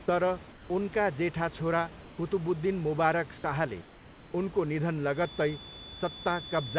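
From 0.52 to 0.70 s, just before "उनका जेठा छोरा", and again from 2.02 to 2.18 s, right after "तर उनका जेठा छोरा", the sender likely stopped transmitting during the pauses, and the receiver filled each gap with comfort noise in place of the background. The real room noise, about 22 to 23 dB under the loudest speech, becomes a flat, featureless hiss for 180 ms and then 160 ms, dropping about 3 dB the first time and about 1 dB the second.

From 5.09 s, just after "मुबारक शाहले उनको निधन", to the end of the clip, the loudspeaker-to-microphone loop likely sits right at the edge of feedback, producing a feedback whistle. A thin, steady 3.5 kHz tone, well below the speech, hangs behind the sound, its level slowly swelling and fading, and sits just under the call path's 4 kHz ceiling.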